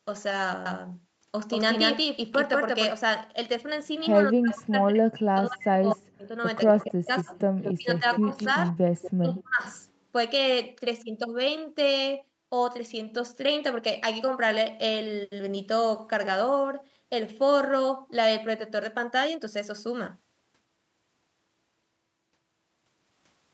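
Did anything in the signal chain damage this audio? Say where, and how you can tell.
Yes. From 0.66 to 2.92 s a doubled audio track appears: a full-band copy, about as loud as the original, trails it by roughly 200 ms and starts and stops abruptly. It is likely a second capture path or an edit. Unlike echo, it isn't thinned or quieter.

Speech suppressed in double talk occurs at 4.3 to 6.33 s, 6.71 to 7.35 s, 7.75 to 8.74 s and 9.19 to 9.62 s, with the voice dipping by as much as about 40 dB. This is likely call processing: the echo canceller turns down its own talker when both sides overlap. A codec dropout would cut out at random instead.

Echo leak appears at 6.68 to 6.85 s, 7.19 to 7.74 s and 8.11 to 9.41 s. A copy of the voice returns 227 to 229 ms late and about 10 to 15 dB down, interleaved with the suppression. That residual echo is quieter than the doubled track.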